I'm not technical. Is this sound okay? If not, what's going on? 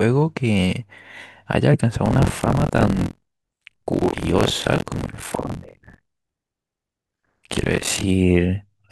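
No. From 2.04 s to 8.06 s the speech picks up a robotic rattle, a buzz at 43.1 Hz. This is buffer tearing. The software and the sound hardware have slipped out of step. So about a third of each chunk replays audio from roughly 50 ms earlier.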